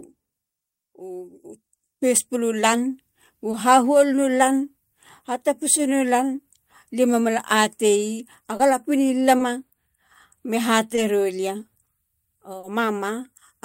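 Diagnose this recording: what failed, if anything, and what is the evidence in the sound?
The network stage failed, with short concealed packet loss in the speech at 3.51–3.55, 8.57–8.61, 9.37–9.41, 10.95–10.99 and 12.59–12.65 s. Each time, about 20 ms of audio (40 ms at 12.6 s) arrived too late, and the decoder extrapolated the preceding sound before crossfading back, leaving a brief smear or wobble. A buffer underrun would instead leave true silence or a hard click. Here the gaps are filled, so nothing drops to zero.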